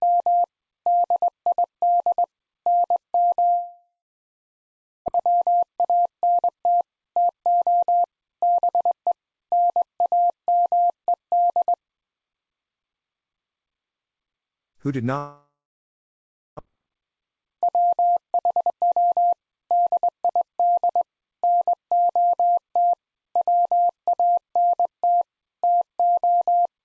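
From 3.50 to 5.10 s, a long network dropout most likely stopped packets arriving. The receiver stretched the last sound into a fading buzz, then left about 1.14 s of near-silence, and roughly a second of audio never returns.

The late packets then arrived in a bunch, leaving the jitter buffer about half a second too full. From 5.18 to 9.31 s, a jitter buffer speed-up trims short pitch-period slices to drain it. The audio runs at 113% speed with unchanged pitch and sounds hurried.

The same pattern repeats. A second long network dropout, again likely from lost packets, runs from 15.18 to 16.61 s: a decaying buzz, then about 1.05 s of near-silence, with roughly a second missing. From 18.23 to 20.27 s, another jitter buffer speed-up removes around 0.4 s, pushing the sound to 119% speed at the same pitch, more noticeably rushed than the first.

Throughout, the call codec leaves nothing above 8 kHz, which fits G.722 at 64 kbps.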